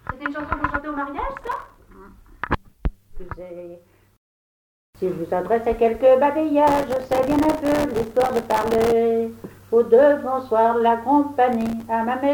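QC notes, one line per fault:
1.38–1.80 s, 6.68–8.92 s and 11.53–11.85 s, processor overload crackle: bursts of gritty, tearing crackle ride on the sound, the middle one lasting over two seconds. The processor keeps missing deadlines for very short buffers, around 1.5 ms each, and every missed buffer drops to silence with hard edges. Around 40 and 20 of these gaps in quick succession in the short bursts, and a few hundred in the long burst, merge into the crackle.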